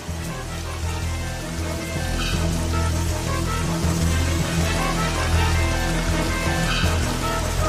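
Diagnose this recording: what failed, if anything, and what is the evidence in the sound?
Nothing in the chain, from wiring and conversion through buffering, processing and playback, gives any audible sign of failure here.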